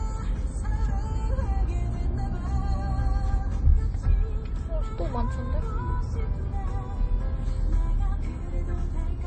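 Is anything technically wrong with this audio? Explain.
Yes. Throughout the clip the sound is dull and smeared, with nothing above about 8.4 kHz. This is likely low-bitrate audio saved at a high bitrate: a roughly 30 kbit/s MP3 re-encoded near 187 kbit/s keeps the first pass's cut-off and artefacts.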